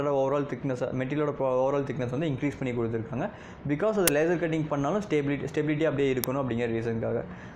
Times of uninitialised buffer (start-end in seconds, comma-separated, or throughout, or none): 4.08, 6.24